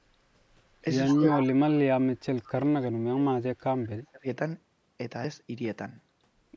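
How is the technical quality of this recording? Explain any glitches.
The recording has two kinds of call-related glitch: a short echo and two stretches where the speech is heavily turned down.

Echo leak, 1.08 to 1.45 s: a delayed copy of the speech trails by 157 ms, about 10 dB quieter, likely loudspeaker pickup the echo canceller missed. On a spectrogram, faint duplicate harmonic bands sit just to the right of the originals.

Speech suppressed in double talk, 1.15 to 2.98 s and 3.14 to 4.27 s: the speech dips and drops out in pieces, by up to about 35 dB and then about 30 dB. The likely cause is an echo canceller that turned down its own talker along with the echo while both sides talked. The waveform shows a collapsing, ragged envelope.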